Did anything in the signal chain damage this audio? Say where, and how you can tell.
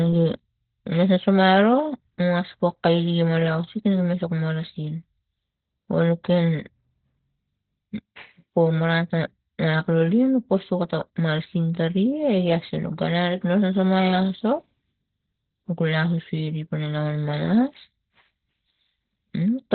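Yes, at the codec: the speech stays muffled and hoarse throughout, and a spectrogram is empty above 4.3 kHz, likely heavy Opus compression in narrowband SILK mode.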